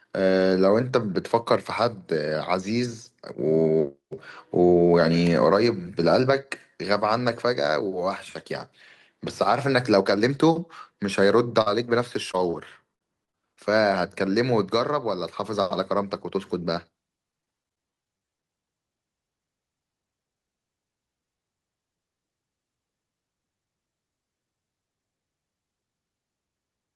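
At 11.61 s a burst of packet loss cuts in for about 65 ms. The last sound is stretched for roughly 45 ms and fades, then about 40 ms is simply missing. It is one continuous hole rather than a string of them, which sets it apart from the choppier stretches later.

Inside that burst, from 11.66 to 11.68 s, is a lost packet rebuilt from error correction. A 20 ms low-bitrate copy fills it, so this slice sounds rough and grainy instead of silent. That graininess without a gap is what marks it apart from plain concealment.

From 12.32 to 13.73 s there is repeated packet loss with a robotic sound. Five separate gaps, the longest 55 ms, are each patched by extending the previous sound, and about 180 ms in total goes missing. Roughly 70 ms of this is rebuilt from error-correction copies.

The same fault returns at 17.31 to 18.50 s, but denser. Fourteen short holes, none longer than 21 ms, are concealed across about a fifth of the span. 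The rapid patching gives a choppy sound with pieces missing, with about 280 ms lost in all.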